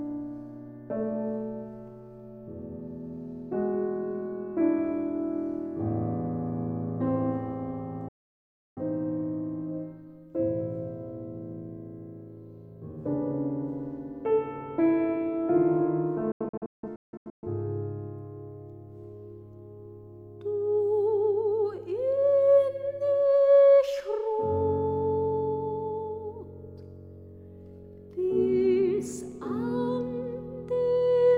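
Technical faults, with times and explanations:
8.08–8.82 s, digital broadcast dropout: the sound cuts to silence with a very quick fade of about 3 ms and stays gone for roughly 0.68 s before coming back mid-programme. The receiver has stopped getting good frames and mutes until clean ones return. The gap fits about 16 frames in a row being discarded, so whatever played during it is simply lost.
16.32–17.47 s, digital broadcast dropout: this one stutters instead of making a single hole. Several short silences are scattered across about 1.1 s, the longest about 0.17 s, adding up to around 0.73 s of missing audio. That sounds like a marginal signal where frames fail their checks on and off, and each failure triggers a brief mute.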